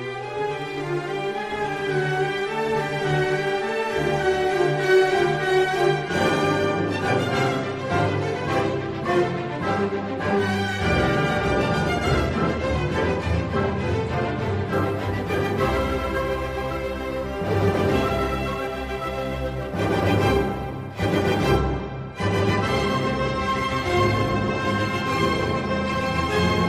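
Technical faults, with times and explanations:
14.73–21.57 s, sample clock jitter: the converter's clock wanders by several microseconds, so each sample is taken slightly early or late, and the error scales with how steeply the waveform is changing. The result is a grainy hiss riding roughly 30 dB below the sound, strongest on loud, bright passages and gone in pauses. A spectrogram shows a diffuse noise haze clinging to high-frequency energy, and the waveform looks unchanged to the eye.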